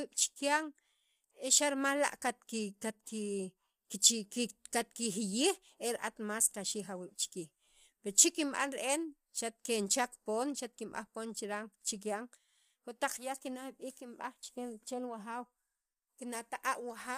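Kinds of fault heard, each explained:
Low-delay AAC compression: the speech was likely coded with AAC-ELD at a rate that fits about 32 kbps, whose short frames resolve voice harmonics poorly. The damage is plainly audible throughout, with rough, grainy voicing and noise filling the gaps between harmonics.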